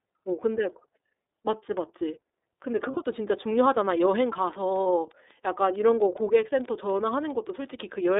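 The whole speech clip passes through the iLBC codec, confined to roughly 250 Hz to 3.7 kHz. Independent per-frame excitation coding leaves plainly audible roughness and a synthetic edge, which fits the 13.33 kbps mode with 30 ms frames.

Lost iLBC frames occur at 2.91 to 2.97 s (60 ms) and 4.83 to 4.86 s (30 ms). The decoder repeats the last pitch cycle blended with noise, heard as a brief held, buzzy vowel, and the voice recovers almost immediately afterward.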